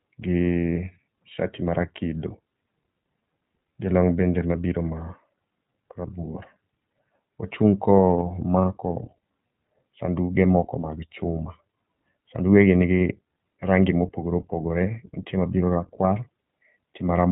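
From start to finish the speech sounds band-limited, slightly rough and synthetic, with nothing above 4 kHz. That is iLBC codec damage: each short frame, fitting 20 ms at a low rate near 15 kbps, codes its excitation independently, so the voice loses naturalness.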